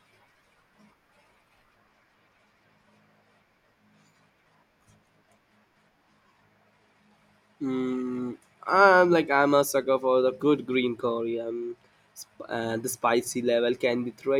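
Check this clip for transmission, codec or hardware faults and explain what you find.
No transmission, codec or hardware faults.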